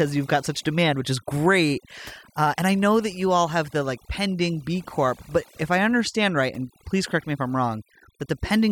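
From start to finish the speech carries overdone noise removal. A noise reducer set far too aggressively pulls individual frequency bands down whenever their level sits close to its noise estimate. Softer parts of the voice fall below that line and vanish with the noise. The background drops and breaks up into twinkling specks. Unlike a noise gate, which mutes everything at once, this works band by band.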